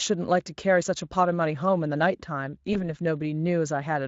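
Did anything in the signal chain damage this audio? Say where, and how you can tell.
Yes. At 2.73 s the speech briefly smears into a buzzy tone or coloured noise that fades, for about 40 ms, and the voice sounds weak or distorted just after. This is VoIP packet loss concealed by the speech codec at the network stage. One 20 ms frame went missing, and the Speex decoder filled the gap by repeating its last pitch and filter at falling gain.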